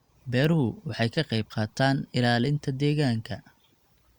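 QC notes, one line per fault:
Nothing to flag on this speech clip, so there's no line to log here.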